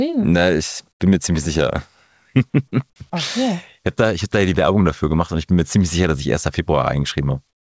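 From 0.92 to 1.00 s, and again from 7.50 s to the end, the quiet background gives way to comfort noise in place of the background: a steady, featureless hiss about 15 dB and 18 dB lower respectively. This is likely discontinuous transmission, with the receiver synthesising filler noise during pauses.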